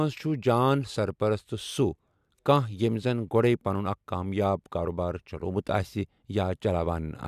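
Speech recording with no audible technical faults anywhere in the clip.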